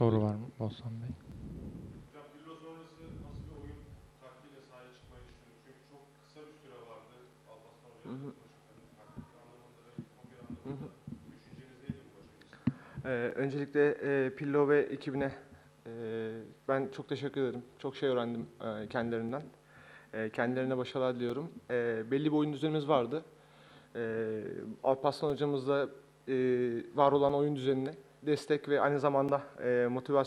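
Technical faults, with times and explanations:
1.31 to 29.29 s, periodic USB or driver dropouts: a short gap of a few milliseconds recurs every 2.0 s, about fifteen times across this range. Each time, the audio path stalls briefly, the missing samples are replaced with silence, and the waveform jumps abruptly to zero and back. That discontinuity is heard as an evenly spaced tick or pop, noticeable only where signal is present. The strict regularity points to a background task blocking the bus or driver on a fixed schedule.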